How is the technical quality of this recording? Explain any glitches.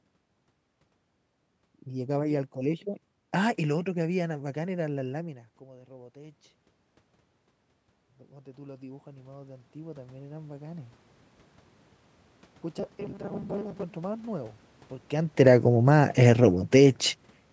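The recording has three audible glitches in the speech: two slow level shifts from automatic gain control and a short stretch of robotic buzzing.

From 8.33 to 11.02 s the voice and the room noise behind it swell together, gradually and in step. This is automatic gain rising. The input level dropped by about 22 dB, so the gain control judged the signal too quiet and raised its gain by about 10 dB over roughly two and a half seconds. Because the gain applies to everything the microphone picks up, the background noise climbs along with the voice.

From 12.79 to 13.83 s the voice turns into a rigid, metallic buzz at 200 Hz that still follows the rough shape of the speech. The likely cause is robotic sound from repeated short buffers. Audio arrived too seldom, so playback filled the gaps by repeating the most recent slice, which fits a buffer of about 5 ms. About half of the sound in that stretch is repeated material, and the real audio it replaced is lost. 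The repetition rate becomes the buzz pitch.

From 15.25 to 16.9 s the sound starts loud and then sinks, with its background, by about 3 dB. This is automatic gain falling. The gain control found the input too loud, or its background too strong, and pulled its gain down gradually to compensate; separately, the talker's distance from the microphone changes near 15 s. The change is smooth rather than sudden.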